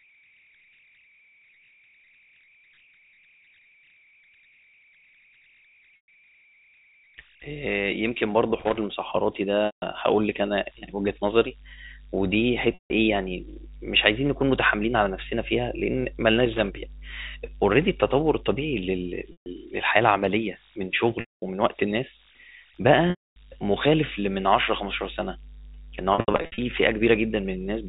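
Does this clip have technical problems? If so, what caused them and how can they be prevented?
Yes. There are three kinds of fault.

The converter has no dither, so on small signals its delta-sigma modulator locks into repeating bit patterns. The result is converter idle tones throughout the clip: a whistle of roughly 2 kHz in the pauses and a grainy texture under quiet speech, with the error sitting about 29 dB below the signal. Enabling dither in the converter, or driving it with proper noise shaping, breaks up the patterns and prevents this.

Packets were dropped on the network, and the receiver covered each gap by repeating the last pitch period and then fading it. This packet loss with pitch repetition occurs at 5.96–6.08, 9.66–9.82, 12.74–12.90, 19.32–19.46, 21.20–21.42 and 23.10–23.36 s. The gaps last 120 to 260 ms, and the pattern fits 20 ms packets. Shorter gaps sound like a briefly held, buzzy sustain, and longer ones thin out before the speech cross-fades back. 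At 26.14–26.58 s the losses are scattered over 440 ms, with the longest run 80 ms. A more reliable network path, a larger jitter buffer, or forward error correction would prevent this.

A worn or dirty contact in the signal chain made and broke as it moved. This is loose connector crackle: irregular bursts of scratching at 8.60–8.77 s and 16.40–16.61 s. Cleaning or replacing the connector and strain-relieving the cable prevents it.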